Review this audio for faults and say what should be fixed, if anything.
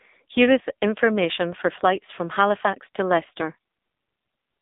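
Throughout, AMR narrowband mobile codec damage confines the speech to a 200 Hz to 3.7 kHz band, and a spectrogram shows a flat ceiling, empty above 3.8 kHz. The heavy buzzy, synthetic tone fits a low 6.7 kbps mode. Record over a wideband path.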